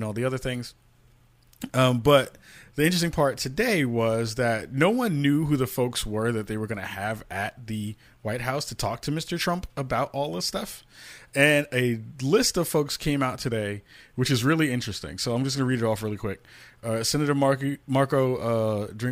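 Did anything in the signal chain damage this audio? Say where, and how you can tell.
Yes: channel delay (comb filtering) from 14.7 to 15.7 s, after "today which is really". One channel arrives about a sample late, so the mono sum dulls the top, notching near 20 kHz.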